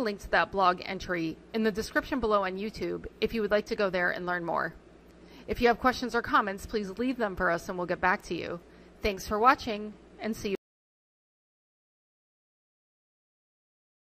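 The audio suffers an audio dropout to silence. At 10.55 s the sound cuts off mid-flow and never returns. From there to the end is silence, with no room tone at all. The likely cause is a lost input, with the recorder still writing silence.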